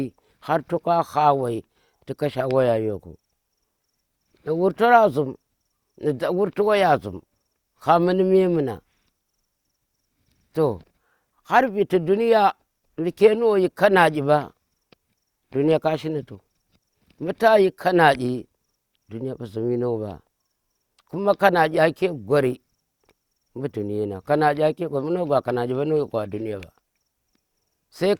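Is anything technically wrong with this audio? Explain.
Yes. There is one electrical switching spike in this speech clip, at 26.63 s. It is a sharp snap, only a few milliseconds long, laid over the speech rather than replacing it. The likely cause is a nearby switch, motor or static discharge arcing briefly. The audio line picks up that burst as a fast transient. So it sounds like a tight click added on top of the sound.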